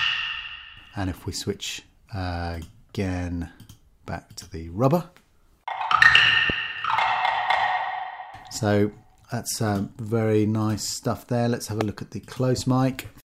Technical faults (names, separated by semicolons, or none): loud pop